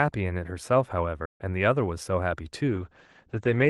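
At 1.25 s the speech cuts out for about 140 ms, then resumes. This playback stall likely came from the player running short of data.

From 2.69 s to the end, a call bitrate drop makes the speech rough and muffled. The Opus band narrows from 12 kHz to 8 kHz, which fits a fall from 32 to 10 kbps.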